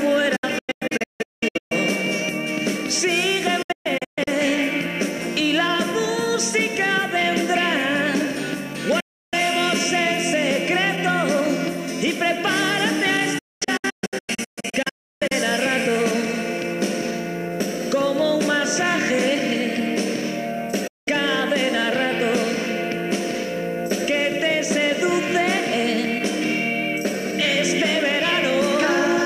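A digital broadcast dropout recurs: the receiver stopped getting valid frames and muted, fading out within about 8 ms. Silences fall at 0.36–1.72 s, 3.62–4.28 s, 9.00–9.34 s, 13.38–15.32 s and 20.87–21.08 s, the longer spans broken into several short holes.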